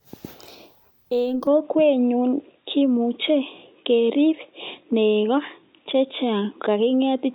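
Speech, where at 1.47 s the input likely switched to a poorer device with no gap, cutting everything above 3.8 kHz, shifting level by about 5 dB, and adding faint background noise through the end.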